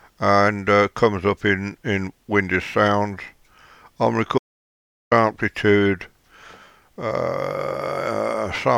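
The input feed was likely interrupted, through a lost device connection or a momentary mute, while recording carried on writing silence, producing an audio dropout to silence from 4.38 to 5.11 s. The sound stops abruptly, leaving roughly 0.73 s of silence with no room tone, then resumes mid-flow.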